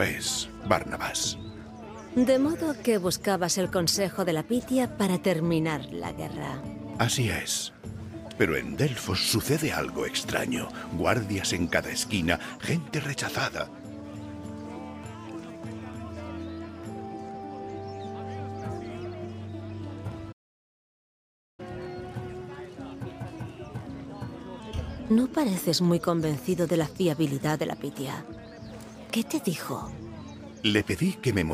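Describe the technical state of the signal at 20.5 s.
At 20.5 s the output is in a playback stall: the sound cuts off mid-flow at 20.32 s and stays silent for about 1.26 s until 21.60 s, likely because the player ran short of data or its thread was blocked. Unlike a brief dropout of a few milliseconds, this is an extended stretch of silence before playback resumes.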